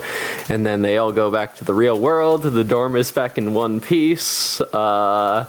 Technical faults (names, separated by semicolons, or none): gain pumping